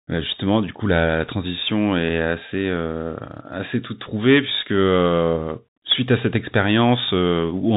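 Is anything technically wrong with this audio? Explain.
Yes. Throughout the speech the sound is boxed-in and thin, with nothing above about 4 kHz. A granular hiss sits under it, s sounds come out scratchy, and loud bright moments distort. This is the Bluetooth CVSD headset codec, and the damage is plainly audible. CVSD sends only one bit per sample, a bare up-or-down step whose size adapts, which fits a 64 kbps stream. Fast, loud high content outruns that step, and the coarse stepping itself leaves the hiss.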